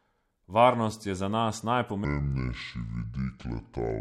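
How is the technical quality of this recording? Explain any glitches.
The recording has one clear glitch: its second half plays back at the wrong speed.

From 2.05 s to the end, there is a section at the wrong speed. The likely cause is a playback or editing stage running that stretch on a mismatched clock, at about 0.64 times the original rate. Because speed and pitch are tied together, the speech suddenly drops by roughly seven semitones and drags, sounding deep, slow and stretched compared with the natural first two seconds.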